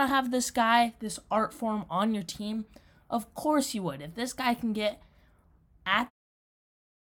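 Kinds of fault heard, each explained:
No kinds of fault are heard in this speech clip.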